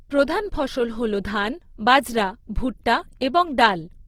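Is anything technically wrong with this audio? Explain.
Yes. Throughout the speech, the sound is rough and grainy, with a noisy fizz in the upper range, though it stays full in bandwidth. This is likely Opus compression in its music mode at a low rate, around 16 kbps. Starved bands get filled with folded or noise-like content.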